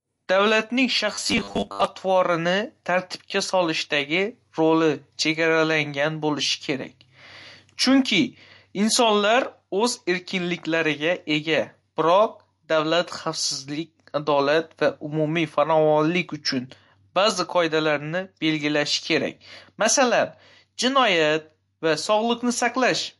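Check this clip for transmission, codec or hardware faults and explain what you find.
Two faults are audible. Throughout the clip, codec damage is plainly audible and nothing reaches above 11.3 kHz, likely from MP3 compression at a low bitrate that fits about 48 kbps.

From 1.13 to 1.86 s, the speech becomes a rigid 100 Hz buzz. This is robotic sound, likely from repeated short buffers: 10 ms repeats replace roughly half the audio.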